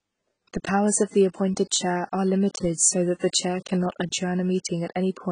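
Throughout, the speech sounds dull, with nothing above 9.7 kHz and a heavily smeared, warbling texture. This is likely AAC compression near 16 kbps.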